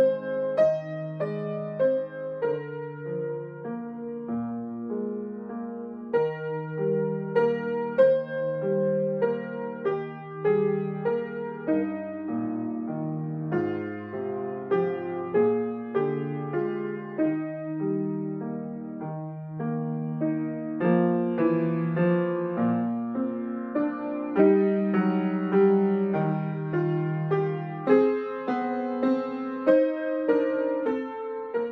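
Nothing stood out as a technical problem on listening to the audio.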